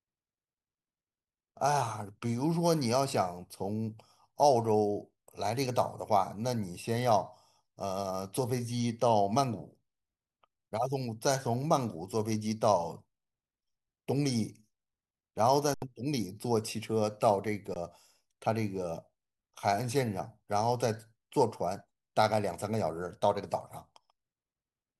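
At 15.74 to 15.82 s and 17.74 to 17.76 s, underruns with held sample stall the sound without a click, and then the audio skips ahead.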